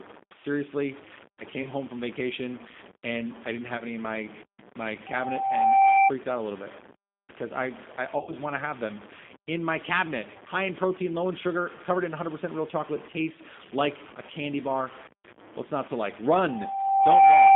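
From the first moment the speech is grainy. Quiet parts turn gritty, and the grit shifts with the sound instead of sitting as a steady hiss. The error tracks the signal at only about 20 dB below it. The likely cause is low bit depth without dither: samples truncated to a very coarse scale, around 6 bits, so each step is audible.

The G.729 codec damage also runs throughout and is plainly audible. The line is confined to roughly 200 Hz to 3.6 kHz. Nothing bright survives. The sound fits the 8 kbit/s G.729A coder. It rebuilds speech from a filter, a pitch predictor and a few pulses per frame. The result stays intelligible but sounds rough and slightly synthetic.

VoIP packet loss concealed by the speech codec occurs three times. From 1.63 to 1.70 s, just before "home from vacation and", about 20 ms of audio is missing. The decoder stretches its last sound to cover the gap. From 3.78 to 3.83 s, between "vacation and I didn't" and "any in my my", another 20 ms gap gets the same treatment. 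The worst comes from 8.18 to 8.38 s, after "bit because I I" and before "want to have them". There, about 90 ms is lost across 140 ms, with one 60 ms run. The sound is stretched and fades, then stays weak briefly as the decoder recovers.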